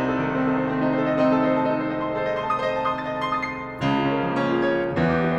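Pre-emphasis left on runs from 2.15 s to 4.84 s of this music. Across that stretch the treble lift applied before storage or transmission was never undone by the matching de-emphasis on playback, so the top end stays raised, by about 8 dB at 10 kHz relative to 1 kHz. That shape fits the CD 50/15 µs curve. The music turns thin and over-bright there, with sibilant detail sounding harsh and forward.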